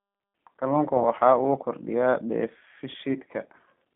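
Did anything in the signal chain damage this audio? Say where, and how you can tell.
Yes. G.729 codec damage at the codec stage, throughout: 8 kbit/s model-based coding leaves speech rough and synthetic, confined to roughly 200 Hz–3.5 kHz.

VoIP packet loss concealed by the speech codec at the network stage, at 0.97–1.01 s and 3.13–3.17 s: brief, fading smears, each fitting one lost 20 ms packet extrapolated by the decoder.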